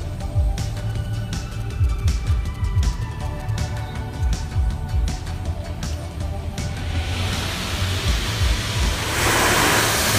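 From 0.90 s to 3.51 s there are GSM signalling bursts: a nearby 2G phone talking to its network, with the audio circuitry rectifying the radio pulses. It comes through as a galloping dit-dit-dit of short 217 Hz buzzes, roughly 25 dB below the sound.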